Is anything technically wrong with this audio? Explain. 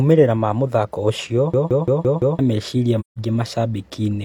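Yes, there are two problems in this speech clip.

From 1.54 to 2.39 s there's a system hang loop. The system froze while the audio hardware kept replaying one 170.67 ms chunk of its ring buffer, which fits an 8192-sample buffer. It repeats five times at about 5.86 Hz, giving a choppy machine-gun stutter, and roughly a second of real audio goes missing.

Then from 3.00 to 3.18 s there's AAC frame loss with muting, a 170.7 ms gap that points to about four lost frames. The decoder zeroed their spectrum, and the overlapping windows fade the sound out and back in, leaving a soft-edged hole.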